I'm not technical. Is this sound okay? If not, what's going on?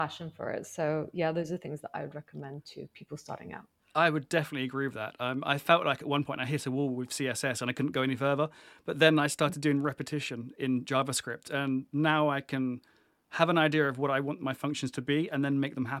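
Yes, no faults heard.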